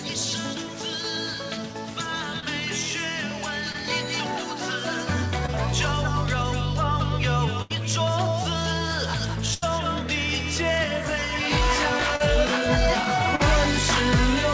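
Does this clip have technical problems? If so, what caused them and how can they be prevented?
Yes, there are three kinds of problem, all heard through a call path whose coding noise and lack of anything above 8 kHz fit G.722 at 64 kbps.

Short concealed packet loss shows up at 2.40, 3.72, 5.46, 12.16 and 13.36 s. Each time about 20 ms (the last two about 40 ms) of audio never arrived in time, and the receiver patched it by extending the previous sound, giving a quick smear or wobble. A larger jitter buffer or forward error correction would cover these.

A burst of packet loss hits at 7.62 and 9.54 s, where about 80 ms in a row went missing. The decoder stretched the last sound into a fading buzz or hiss, then jumped ahead with that chunk gone. A steadier network link, or redundancy in the stream, prevents these.

Channel delay (comb filtering) runs from 10.84 to 13.21 s. One channel lags the other by roughly 20 ms, and summing them to mono cancels shared content at evenly spaced notches starting down around 30 Hz, so the sound turns rough or slightly doubled. 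Keeping both channels time-aligned before the mono downmix avoids it.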